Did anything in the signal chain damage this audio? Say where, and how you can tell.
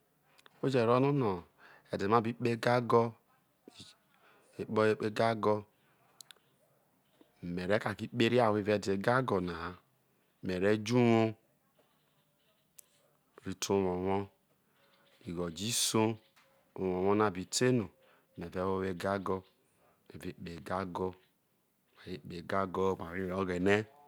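No, nothing along the signal chain has damaged this speech recording; the signal holds steady and continuous with no audible disturbance at any stage from capture to playback.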